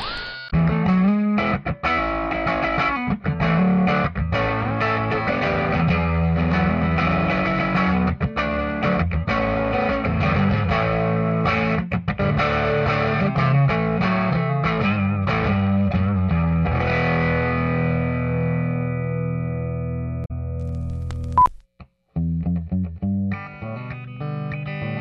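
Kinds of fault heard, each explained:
Damaged data in a compressed stream: a stretch of the encoded file is corrupt, so the decoder misreads those frames, loses its place and hunts for the next valid frame header. Here it shows as two brief glitches, at about 0.46 to 0.53 s and 20.22 to 20.31 s, each under a tenth of a second.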